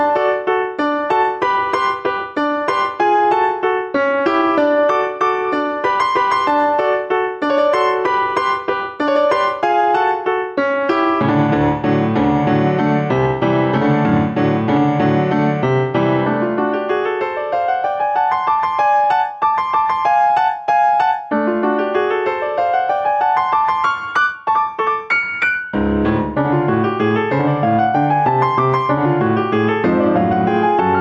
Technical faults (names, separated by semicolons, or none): gain pumping